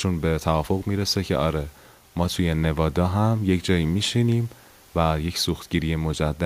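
No technical faults can be heard anywhere in this speech recording. There is nothing to place at any point in the audio.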